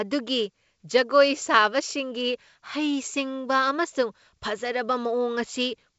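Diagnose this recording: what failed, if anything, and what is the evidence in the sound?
Nothing failed; this speech recording shows no faults.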